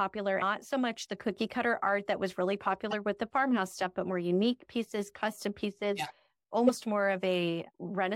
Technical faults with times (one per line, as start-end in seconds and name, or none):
2.91-2.93 damaged data in a compressed stream
6.65-6.69 damaged data in a compressed stream